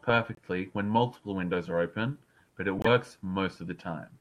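Speech clip with a corrupt frame decoded twice: a faint blip around 0.35 to 0.39 s, then a much louder burst at 2.78 to 2.87 s, as damaged frames got played anyway.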